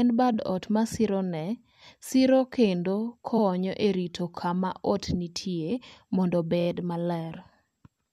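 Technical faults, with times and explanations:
0.33–0.35 s, 3.37–3.42 s and 6.60–6.67 s: repeated frames. Short blocks of speech play again, causing stutters. The first replays 23.2 ms once, the second 46.4 ms once, and the third 23.2 ms three extra times, adding 69.7 ms.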